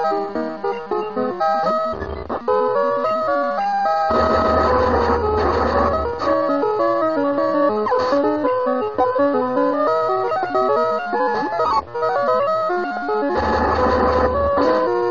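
At 1.26 s, 5.39 s and 11.10 s the sound jumps forward, a sign of compressed frames skipped. The jumps point to roughly twenty, five and ten missing frames of about 46.4 ms, losing around a second, a fifth and half a second of audio. Unlike a dropout, no silence is inserted. Each join spans about 50 to 60 ms.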